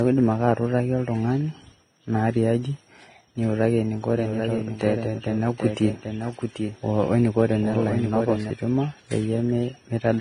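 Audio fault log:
Throughout: transcoding between lossy codecs. Nothing is present above 15.5 kHz. Two different sets of coding artefacts sit on top of each other. This likely comes from a low-rate Vorbis encode followed by an HE-AAC re-encode around 32 kbit/s. The second codec spends bits on the first codec's damage and adds its own.
4.15–8.51 s: doubled audio track. A second full-band copy of the speech runs roughly 0.7 s behind the original, about 5 dB quieter. It has no decay or room colour. It starts and stops abruptly. This is likely a second capture through a slower path being mixed in.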